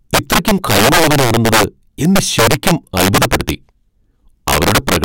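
A speech recording with integer overflow running through the whole thing. The level was pushed about 10 dB past full scale, and instead of being limited, the loudest peaks wrapped around to the opposite extreme of the integer range. Roughly one sample in twenty goes over, so every loud syllable comes with a violent crack, far harsher and spikier than ordinary clipping would sound, while the quieter stretches between them pass through intact.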